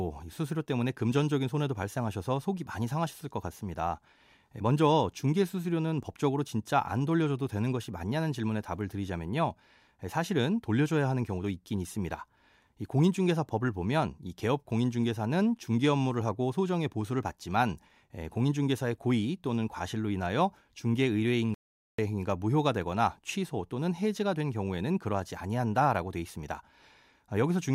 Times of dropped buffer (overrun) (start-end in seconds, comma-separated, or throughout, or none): none